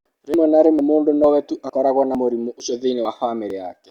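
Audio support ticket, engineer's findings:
Audio missing between chunks at 0.34, 0.79, 1.24, 1.70, 2.15, 2.60, 3.05 and 3.50 s; abrupt skips in the speech every 0.45 s, around 50 ms gone each time, e.g. between "mũndũ no" and "we tu", and after "na mũrimũ" at 2.60 and 3.05 s. Likely cause: the capture stage drops a slice at each 0.5 s chunk handover, and the surrounding audio is butted together.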